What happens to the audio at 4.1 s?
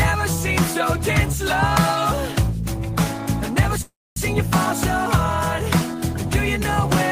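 At 4.1 s the sound has stalled. From 3.81 s the last moment is stretched into a fading buzz, then about 0.25 s of silence, before resuming at 4.18 s exactly where it stopped. This call audio freeze likely came from delayed packets draining the jitter buffer, adding a 349 ms gap.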